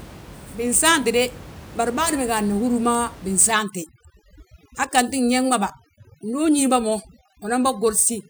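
From 3.52 s to the end, the background drops and breaks up into twinkling specks; this is overdone noise removal, suppressing bands near the room noise, which sits about 20 dB below speech.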